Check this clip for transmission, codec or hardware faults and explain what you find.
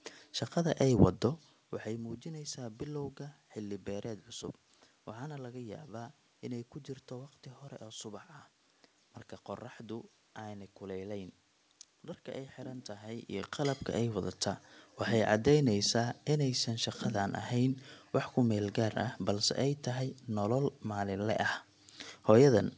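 No transmission, codec or hardware faults can be heard in this speech recording. The audio stops at 8 kHz, which fits a wideband call codec such as G.722 in a WebRTC call path, and the level shifts near 1 s and 13 s sound like the talker moving relative to the microphone.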